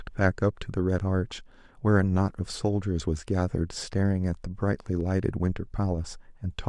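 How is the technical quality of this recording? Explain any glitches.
The recording has one glitch: a single click at 5.01 s. It is most likely caused by dropped samples, where a fraction of a millisecond of the speech stream goes missing. The waveform jumps abruptly to a later value, producing one sharp click too brief to remove any audible sound.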